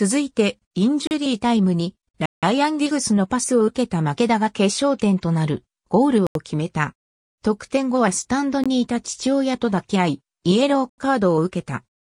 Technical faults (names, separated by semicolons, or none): block of digital silence